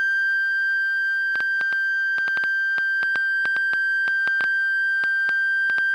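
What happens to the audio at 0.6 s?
Nothing goes wrong at 0.6 s; the music plays through that moment intact, with no dropout, click or distortion.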